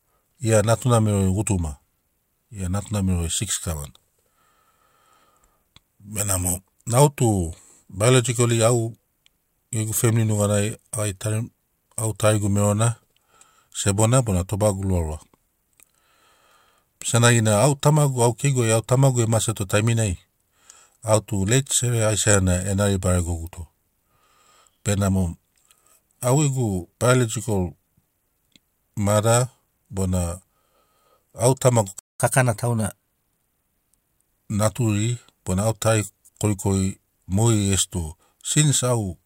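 At 31.99 s the speech cuts out in mid-flow. Silence holds until 32.20 s, a gap of about 0.21 s. This is a playback stall. The likely cause is that the player ran dry of buffered audio, or its output thread was held up, so nothing reached the output for that span. The break is abrupt and clearly audible.

From 32.20 s to 34.27 s the speech runs fast. This is catch-up at higher speed. After the stall the player resamples its backlog to recover the lost time. Playback runs at 1.1 times normal speed. Because resampling shifts speed and pitch together, the pitch rises by about one and a half semitones. The speech sounds rushed and slightly raised for roughly two seconds. Both then drop back to normal at 34.27 s.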